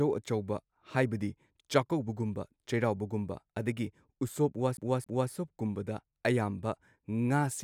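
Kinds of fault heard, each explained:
CD stuck on one turn: a scratch on the disc makes the laser jump back one track at the same point each revolution, so a fixed slice of audio replays with a brief mute at every jump. In this speech clip it happens from 4.77 s to 5.31 s, where a segment of about 0.27 s repeats twice in quick succession. The result is an even, mechanical stutter rather than a natural hesitation.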